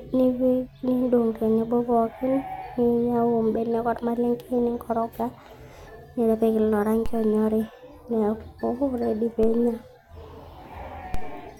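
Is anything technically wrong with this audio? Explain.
Yes. DC steps at 7.06, 9.43 and 11.14 s: the waveform's zero line suddenly shifts by about -19, -19 and -16 dBFS, then drifts back as a 2 Hz high-pass bleeds it off. Each jump lands as a dull low thump under the speech, which carries on unchanged.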